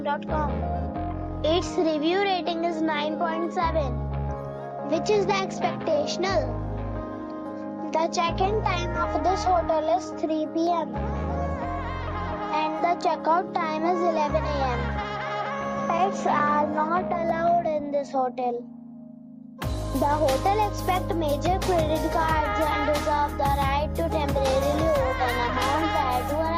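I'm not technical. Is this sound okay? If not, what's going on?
Yes, nothing in this audio points to a technical fault, so there is nothing to fix.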